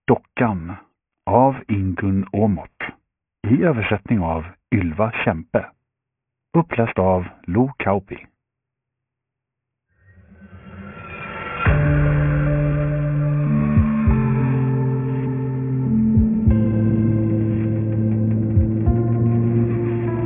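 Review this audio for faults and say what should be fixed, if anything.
Aliasing runs through the whole clip. High content folds back below 3 kHz as gritty, metallic tones unrelated to the sound, sitting well under the main level, which points to a drop from 48 kHz to 6 kHz without filtering. Plain band-limiting would sound dull, not harsh. Prevent it by low-pass filtering below the new half-rate before resampling.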